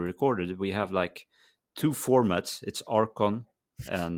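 At 0.83 s, just before "like two", and again at 2.21 s, just after "like two", a lost packet rebuilt from error correction leaves 20 ms of rougher, noisier speech with no gap. The audio points to a single lost packet each time, replaced by a low-bitrate copy from the next one.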